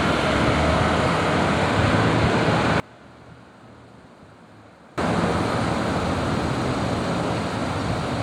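From 2.8 to 4.98 s the sound drops by about 26 dB and turns faint. The likely cause is one channel inverted. One stereo side has flipped polarity. Summed to mono, the shared content cancels. Only the small difference between channels survives.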